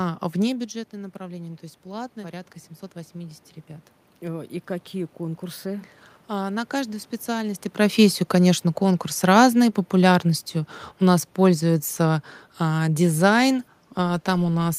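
A speech recording with room noise shows automatic gain rising from 4.19 s to 7.14 s, ending just before "и профессию конечно конкурс". The level reaching the microphone drops by about 13 dB, and the automatic gain control responds by raising its gain by about 3 dB over those three seconds. Voice and room noise swell together. On the waveform the envelope creeps upward across that span. On a spectrogram the noise floor between phrases brightens gradually at all frequencies, not just within the speech.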